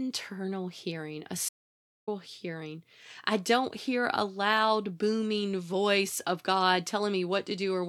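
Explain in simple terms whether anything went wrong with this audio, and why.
Something did go wrong: there's an audio dropout to silence from 1.49 to 2.08 s, right after "hearing a". The sound cuts to dead silence for just over half a second, with no room noise at all, then resumes at "hearing I don't hear". The likely cause is a brief input loss while the recorder kept writing silence, so whatever was said in that gap is gone.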